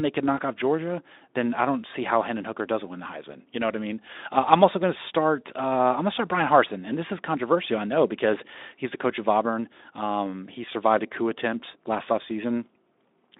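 No technical faults are present.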